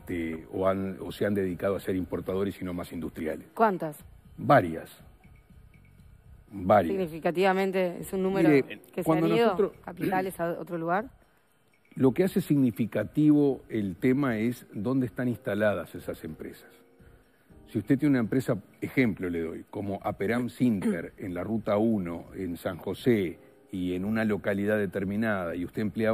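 Nothing in the audio stands out as a technical fault at any point, so there's nothing to flag here.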